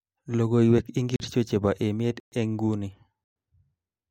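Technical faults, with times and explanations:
1.16–1.20 s, 2.20–2.32 s, 3.24–3.36 s: block of digital silence. The speech drops to silence for 40, 120 and 120 ms, leaving short holes where it cuts out and back with no fade.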